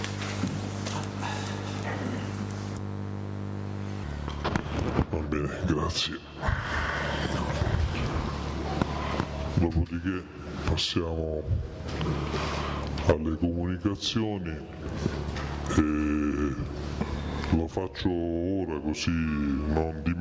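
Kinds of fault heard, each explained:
Wrong sample rate: From 4.04 s to the end, the audio plays without rate conversion, too slowly. It runs at 0.726 times normal speed. Pitch drops by about 5.5 semitones, so everything sounds low and dragged. This fits 22 kHz material played back at 16 kHz.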